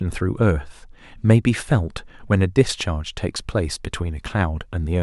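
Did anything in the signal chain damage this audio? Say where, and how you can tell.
No, nothing in the chain audibly damaged this speech recording, and the signal reaches the listener intact, with no stage leaving a mark on it.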